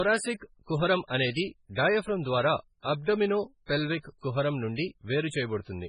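Throughout the speech, heavy MP3 compression leaves nothing above 10.4 kHz and a watery, swirly texture, likely from encoding at around 16 kbps.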